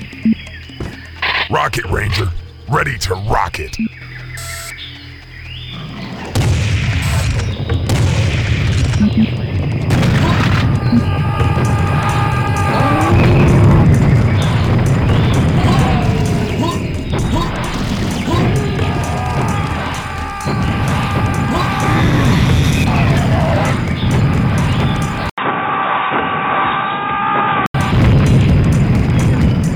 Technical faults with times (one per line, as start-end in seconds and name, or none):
25.30-27.74 input switched to a poorer device